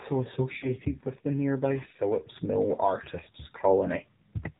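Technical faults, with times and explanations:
Throughout: AMR narrowband mobile codec. Nothing passes above 4 kHz, so a spectrogram shows a hard ceiling there. The plainly audible buzzy, synthetic quality of the speech fits a low mode around 7.4 kbps, where a few pulses drive a vocal tract model.
0.58–0.75 s and 3.24–3.27 s: lost AMR speech frames. The decoder repeats the last good pitch and vocal tract settings at falling gain, so the sound smears and fades. The waveform shows a decaying repeated cycle. The first gap suggests about two 20 ms frames, the second one.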